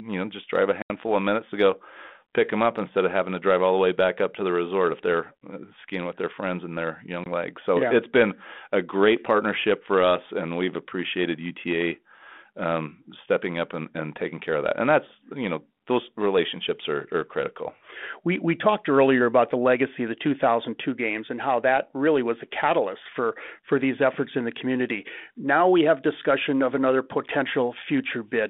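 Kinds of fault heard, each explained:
Packet loss on an ADPCM call: speech drops into hard-edged silent gaps, about 80 ms at 0.82 s after "know just drive a" and 20 ms at 7.24 s. Lost packets were replaced by silence, leaving the decoder's adaptive predictor and step size out of step with the sender's.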